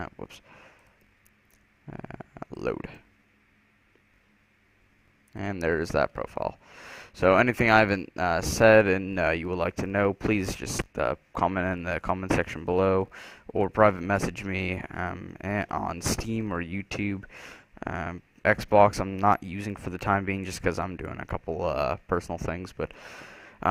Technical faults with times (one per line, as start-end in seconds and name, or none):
0.00-16.60 filter restarted on every block